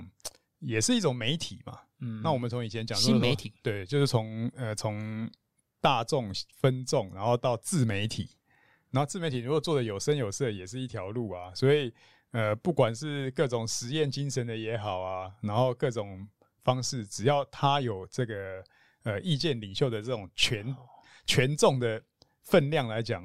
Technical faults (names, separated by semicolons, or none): none